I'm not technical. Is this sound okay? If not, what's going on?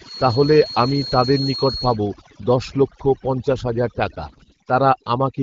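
No. Throughout, the background sounds unnaturally silent and twinkles. That's overdone noise removal: a cleanup tool set too strong stripped away quiet parts of the voice along with the noise.

From 4.25 to 4.58 s, just after "লক্ষ পঞ্চাশ হাজার টাকা", the voice turns hoarse, scratchy and gargly. These are AMR bit errors: a weak phone connection corrupted part of the call data.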